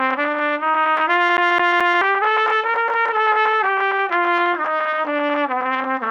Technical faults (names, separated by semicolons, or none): CD stuck on one turn